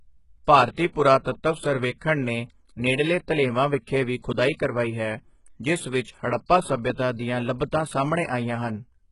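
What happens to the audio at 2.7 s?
At 2.7 s the speech is likely going through heavy HE-AAC compression, which affects the whole clip. Treble up to 11.1 kHz is rebuilt from copied lower bands, so s sounds come out gritty and lispy.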